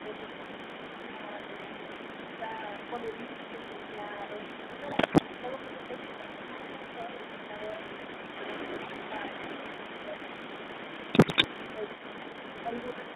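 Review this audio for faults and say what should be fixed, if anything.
The call was carried over the GSM full-rate codec, whose coder models the vocal tract and excites it with a sparse, regularly spaced pulse train, discarding most of the excitation detail. Throughout the clip, that makes the speech plainly buzzy and gravelly, and the line band sits between 200 Hz and 3.6 kHz, so the sibilants and upper harmonics are missing. The sound fits a 13 kbps stream. Prevent this by negotiating a wideband codec end to end.

A filter in the chain is restarted on every block: its internal state is wiped and each block begins from silence instead of continuing smoothly from the last. Each restart produces a small transient, and because the blocks repeat at a steady rate, those transients merge into a 50 Hz buzz that runs under the whole clip and rises and falls with the speech level. That rate fits 20 ms processing blocks. 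Prevent this by carrying filter state across block boundaries.

An echo leak runs for the entire clip, most likely because the far end plays the call on a loudspeaker and its echo canceller fails to remove what its microphone picks back up. The residue is returned as a delayed copy of the speech, trailing the original by 346 ms and sitting only about 5 dB below it. Prevent this by fixing the far-end echo canceller's adaptation and adding residual echo suppression.

Speech suppressed in double talk appears between 1.16 and 1.58 s, likely because both sides spoke at once and the echo canceller, unable to tell its own talker from the loudspeaker echo, turned the signal down. The speech dips by roughly 5 dB in pieces adding up to around 150 ms, so parts of that stretch sound briefly pushed back. Prevent this with reliable double-talk detection that freezes adaptation rather than attenuating the near-end talker.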